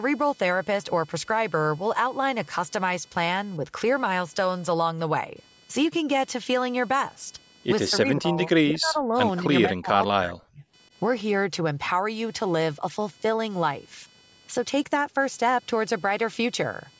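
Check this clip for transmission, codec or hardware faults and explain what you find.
Two faults are audible: a steady computer noise under the whole recording, and the speech breaking up between 7.9 and 10.63 s.

Computer activity noise runs throughout as a faint buzz pulsing at around 500 times a second, roughly 30 dB below the speech. It follows the machine's workload, not the talking, because processor or peripheral load currents disturb the ground the audio circuitry shares.

Speech suppressed in double talk appears from 7.9 to 9.15 s, at 9.39 s, and from 9.65 to 10.63 s. The voice sinks by about 20 dB, then about 10 dB in the brief dip, then about 40 dB, nearly vanishing. Likely both sides spoke at once, and the echo canceller, unable to separate talker from loudspeaker echo, attenuated both.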